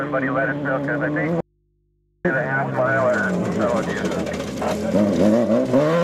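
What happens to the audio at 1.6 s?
At 1.6 s the sound sits inside an audio dropout to a faint residue, running from 1.41 to 2.25 s. For about 0.84 s the signal vanishes abruptly, leaving only mains hum some 45 dB below it, likely because the source was lost while the path stayed live.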